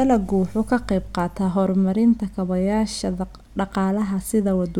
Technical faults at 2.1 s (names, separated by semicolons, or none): none